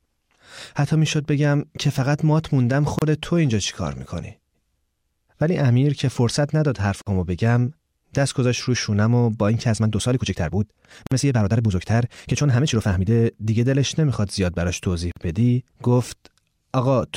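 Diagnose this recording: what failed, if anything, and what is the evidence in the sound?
Brief silences break the speech at 2.99, 7.02, 11.07 and 15.12 s, every 4 s, lasting 31 ms then about 49 ms: gaps at joins of separately encoded pieces, where untrimmed codec delay and padding remain.

From 9.67 to 13.14 s the speech turns rushed, about 1.46 times faster at unchanged pitch, likely a time-stretched section squeezed by software dropping short pieces.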